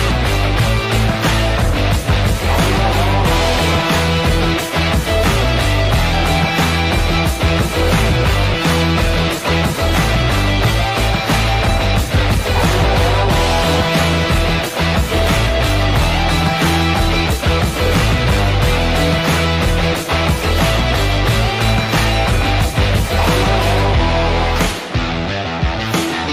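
At 8.54 s the audio abruptly jumps forward. There is no silence or fill at the join; the material on either side simply butts together, with roughly 0.7 s of sound missing in between. This is a skip ahead. A stretch of audio was dropped while later audio was already queued, either lost in transit or discarded by a jitter buffer that overflowed. Playback resumed from the waiting audio and cut the latency by about that same amount.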